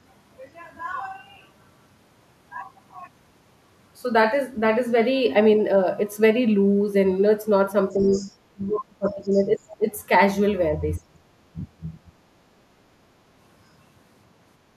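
Other side's voice leaking through, from 7.92 to 8.31 s, and speech suppressed in double talk over the same stretch: a second voice sits roughly 15 dB under the talker, and the talker dips by around 10 dB. Both voices overlap here, and the likely cause is an echo canceller that let part of the loudspeaker signal back into the microphone and then turned everything down.

Speech suppressed in double talk, from 8.51 to 9.86 s: the talker's level collapses by as much as roughly 30 dB for about a second. Inside that stretch, the other side's voice leaks through in faint scraps at 9.23–9.27 s, about 35 dB down, and 9.58–9.75 s, about 25 dB down. This is likely the canceller failing to separate the two talkers, so it suppresses both while leaving echo fragments behind.

Speech suppressed in double talk, from 10.98 to 12.18 s: the talker fades by roughly 25 dB for about a second. This is likely the same suppression reacting to simultaneous talk.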